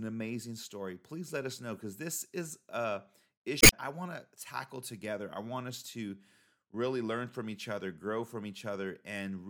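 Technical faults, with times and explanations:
3.59 to 3.74 s, damaged data in a compressed stream: right after "because this is a", the speech breaks up for about 0.14 s, and it picks up again at "I want". A stretch of the compressed data here was corrupted, so the decoder misread those frames, lost sync, and produced garbage until it found the next valid frame header and resumed.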